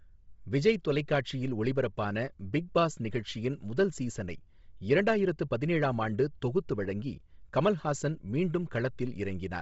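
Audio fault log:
Throughout, Bluetooth LC3 compression: harsh, grainy, breathy speech with nothing above 7.7 kHz, likely from LC3 stripping the upper spectrum and filling it with noise, which fits 24 kbps with 7.5 ms frames.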